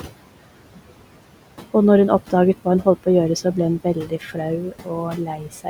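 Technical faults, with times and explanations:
Throughout, noise suppressor artifacts: the suppressor pulls steady background down by about 18 dB frame by frame, so the room noise, about 15 dB under the speech, sinks in pauses and rises under talking.
3.84–4.37 s, 4.72–4.91 s and 5.12–5.67 s, speech cut by the noise suppressor: the first right after "så ble hun", softer speech is taken for noise and turned down by about 12, 16 and 12 dB, roughly 0.2, 0.1 and 0.4 s in total, so parts sound swallowed rather than merely warbly.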